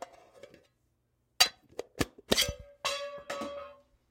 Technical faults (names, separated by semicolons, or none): none